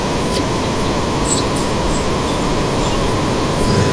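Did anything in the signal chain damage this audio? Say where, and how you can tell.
No, nothing in this speech recording stood out on listening as damage from any stage of the signal chain.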